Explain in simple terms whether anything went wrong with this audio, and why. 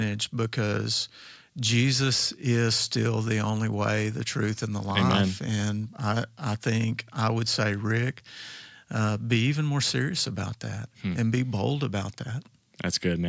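Nothing went wrong with this speech recording. It passed through the normal microphone processing of a call, which trims away the deepest bass and leaves nothing above 8 kHz, so it sounds a little less full and airy than a studio recording, as expected.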